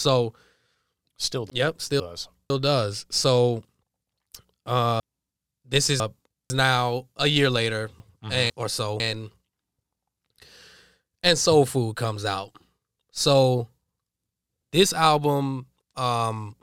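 Chunks out of order occur at 1.5 to 2.5 s, 5.0 to 6.5 s and 8.0 to 9.0 s in this speech. Half-second chunks of audio arrived late and were played after those meant to follow them: one chunk late in the first and third spots, two chunks late in the second. Nothing is missing, but each spot sounds jumbled, with three hard joins where mismatched segments meet.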